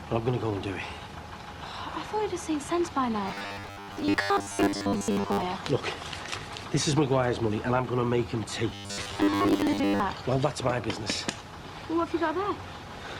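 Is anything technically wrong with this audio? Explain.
Yes. Robotic sound from repeated short buffers appears from 3.28 to 5.43 s and from 8.70 to 10.00 s. New audio likely arrived too late, so a 10 ms fragment was replayed over most of the real signal. This imposes a rigid, metallic 100 Hz buzz.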